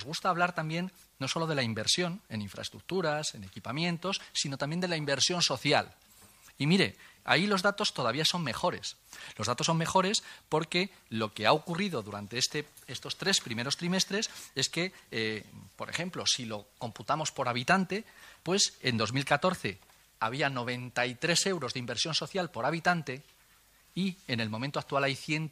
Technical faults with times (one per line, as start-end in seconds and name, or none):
none